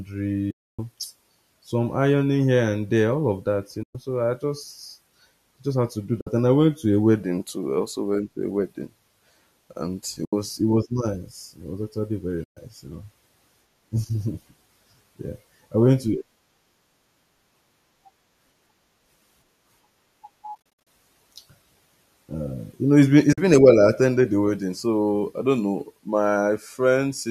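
AAC frame loss with muting: runs of AAC frames never reached the decoder, which zeroed their spectrum, so the overlapping windows fade the sound down into silence and back up. The gaps sit at 0.51 to 0.79 s (280 ms, the longest), 3.83 to 3.95 s (120 ms), 6.21 to 6.27 s (60 ms), 10.25 to 10.33 s (80 ms), and 12.44 to 12.57 s (130 ms). From about 20.55 s, 200 ms of losses are scattered across roughly 320 ms, the longest single hole around 70 ms, giving a stuttering series of soft dropouts. The last gap is at 23.33 to 23.38 s (50 ms). The hole lengths step in 10 ms units, which fits the short frames of low-delay AAC-ELD. The light coding damage in the speech is likely from that codec at a bitrate that sounds like about 64 kbps.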